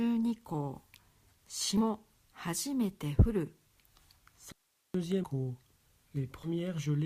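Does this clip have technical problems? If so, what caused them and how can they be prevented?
Yes, there are two kinds of problem. First, compressed frames skipped at 1.77 to 1.80 s and again at 6.43 to 6.49 s. Each time the audio jumps forward by roughly three 20 ms frames, so around 70 ms of material just isn't there. The frames were either missing from the file or rejected by the decoder as damaged. Preventing this comes down to a clean transfer and storage path with error checking, so frames arrive intact and the decoder has nothing to throw away.

Second, there's an audio dropout to a faint residue from 4.52 to 4.94 s. The signal cuts out abruptly for about 0.42 s and comes back just as suddenly. In the gap there's only hiss, sitting roughly 45 dB below the normal level. That's not a pause or a fade. The likely cause is a brief break in the feed ahead of the recorder, such as a wireless link or loose connection losing the source, while the input stayed live and kept recording its own noise. 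Securing connections and monitoring wireless signal strength during capture would stop this happening.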